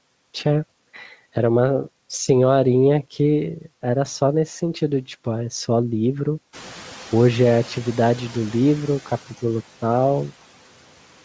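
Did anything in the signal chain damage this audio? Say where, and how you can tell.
Yes. At the call-processing stage, a noise suppressor was catching up: when the room noise jumped by about 16 dB around 6.5 s, its noise estimate lagged, so from 6.53 to 8.84 s the noise leaks through before sinking by about 5 dB over 2.31 s.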